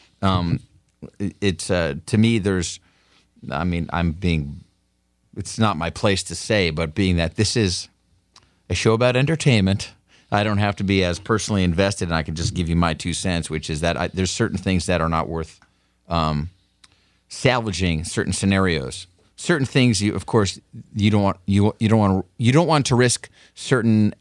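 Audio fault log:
No technical faults are audible anywhere in the recording.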